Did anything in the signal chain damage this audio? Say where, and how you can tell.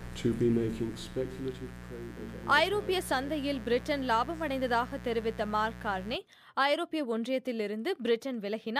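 Yes. Mains buzz runs from 0.0 to 6.16 s in the analogue wiring stage, a raspy 60 Hz buzz sitting only about 15 dB below the sound. Sharp switching spikes, twice per mains cycle, leaked in through a dimmer, rectifier or poor shielding, spraying harmonics into the kilohertz range.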